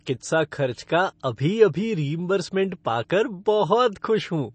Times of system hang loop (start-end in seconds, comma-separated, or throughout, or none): none